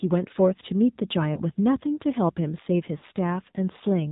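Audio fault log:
throughout: AMR narrowband mobile codec. The speech sounds boxed-in and buzzy, with a synthetic edge and nothing above 4 kHz. The damage is plainly audible, which fits a low AMR-NB mode around 7.4 kbps. The codec samples at 8 kHz and rebuilds each 20 ms frame from a vocal tract filter excited by a handful of pulses. At this rate those pulses are too sparse to carry natural texture, so the voice turns mechanical.
1.34–1.40 s and 2.98–3.04 s: lost AMR speech frames. The first gap is a brief dip or warble lasting about 20 ms, which points to a single missing frame. The second runs about 40 ms, consistent with two frames in a row, and sounds more smeared and stretched before the voice returns weak or rough for a moment. In both places the decoder had nothing valid to play. It filled the hole by repeating the last good pitch and vocal tract settings at lowered gain.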